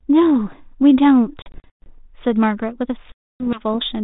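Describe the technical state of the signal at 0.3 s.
At 0.3 s the speech is intact, with no fault at that moment, and it carries only the narrow telephone band of the G.726 ADPCM path it passes through.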